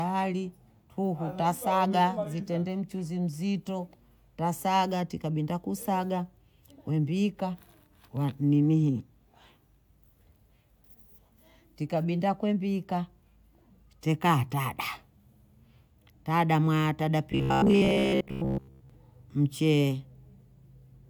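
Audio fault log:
17.32 to 18.90 s, robotic sound from repeated short buffers. Right after "tada mwaya tada", the speech turns into a stiff, metallic buzz. It still loosely tracks the speech. The buzz sits at 66.7 Hz, which fits a chunk of about 15 ms being replayed over and over. Most of this stretch is repeats rather than fresh audio. The likely cause is new audio arriving too late, so playback loops the last short buffer and skips the real sound.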